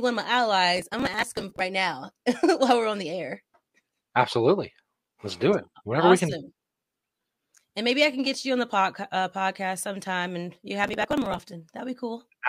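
Processor overload crackle appears from 0.77 to 1.61 s and again from 10.84 to 11.39 s in this speech. In both stretches the processor falls behind on its small audio buffers, and each missed deadline drops a short slice of sound outright, leaving a hard-edged gap. Dozens of these skips in quick succession, with a spacing that fits buffers of around 5 ms, merge into a gritty, tearing crackle over the speech that stops once the load eases.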